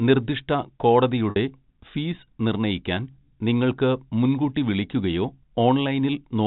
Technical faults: packet loss with pitch repetition

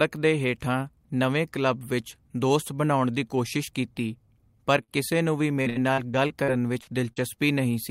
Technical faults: short concealed packet loss; repeated packet loss (robotic sound)

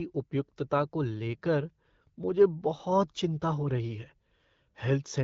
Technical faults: none

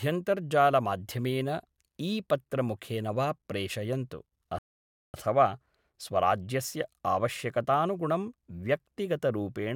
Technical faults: rebuffering stall

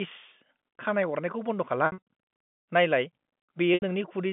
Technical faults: packet loss with pitch repetition

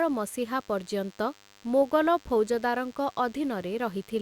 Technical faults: DECT cordless phone buzz

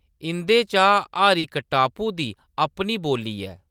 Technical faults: short concealed packet loss

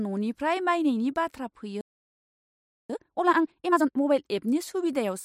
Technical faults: playback stall; time-compressed catch-up

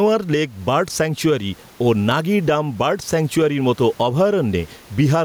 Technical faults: gain pumping

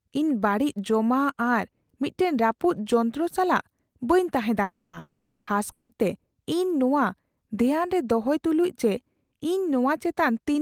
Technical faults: long network dropout

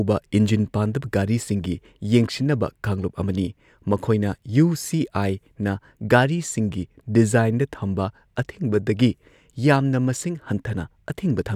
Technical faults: none

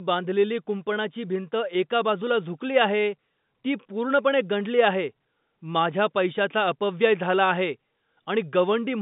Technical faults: none

